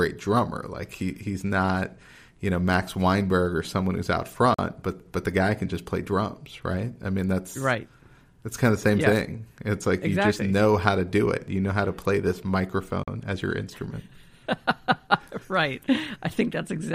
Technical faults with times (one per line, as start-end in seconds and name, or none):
4.54-4.59 Bluetooth stall
13.03-13.08 Bluetooth stall